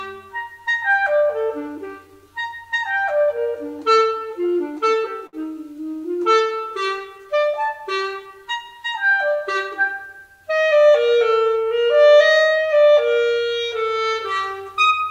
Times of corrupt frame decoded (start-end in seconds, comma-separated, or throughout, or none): none